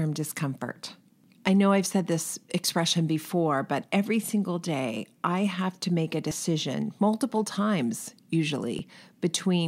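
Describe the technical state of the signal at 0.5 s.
At 0.5 s the speech signal is intact, with no audible fault at that moment.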